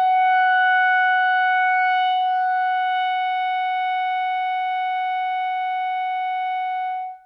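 No technical faults can be heard in this music.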